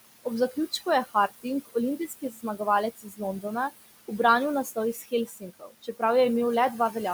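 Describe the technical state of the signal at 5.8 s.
At 5.8 s the speech sounds swallowed and faint, dipping by up to about 18 dB. This is speech cut by the noise suppressor, which runs from 4.93 s to 6.02 s and affects roughly 0.7 s in total within that span. The suppressor misjudged these quieter speech components as background and pulled them down with it.

Underneath, the residual background sinks between the words and rises under them. These are noise suppressor artifacts, present throughout. The steady room noise, which sits about 15 dB below the speech, is being lowered by about 19 dB band by band and frame by frame.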